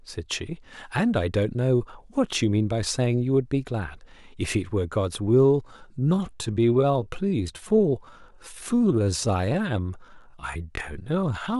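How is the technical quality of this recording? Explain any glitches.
The recording has one glitch, a time-stretched section running from 5.16 s to the end at 11.60 s. The speech abruptly slows to about 0.72× pace with unchanged pitch, sounding dragged, likely from software repeating short fragments to lengthen it.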